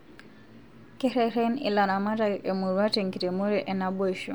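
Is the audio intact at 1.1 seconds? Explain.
Yes, at 1.1 seconds the speech plays through cleanly with no dropout, click, distortion or other audible fault.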